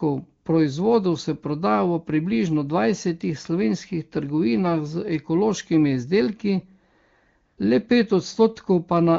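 From 7.45 to 7.57 s, AMR comfort noise replaces the real background for 120 ms: the sender judged the talker silent and stopped sending speech frames, so the receiver synthesised smooth, steady noise. Unlike a dropout, the gap stays filled, with a switch in texture rather than silence.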